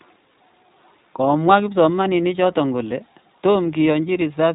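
The speech has passed through the iLBC codec, a narrowband coder that rebuilds each short frame on its own, consistent with 20 ms frames at around 15 kbps. Nothing above 3.8 kHz survives, so the audio is muffled, slightly rough and plainly synthetic throughout.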